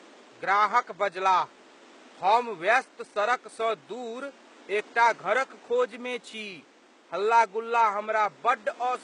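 Throughout the speech, the treble sounds rebuilt rather than recorded, and the damage is plainly audible. This is likely HE-AAC compression at a low bitrate around 16 kbps. Copied upper bands misalign harmonics, so s sounds turn gritty, metallic or lispy. Room noise sits about 29 dB below.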